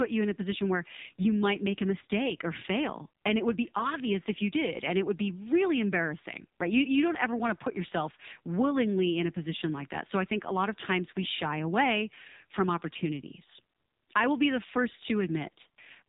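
AMR narrowband mobile codec damage runs through the whole clip: nothing passes above about 3.8 kHz, and the voice is squeezed through a vocal-tract model fed by sparse pulses per frame. The heavy buzzy, synthetic colouring fits a low 5.9 kbps mode.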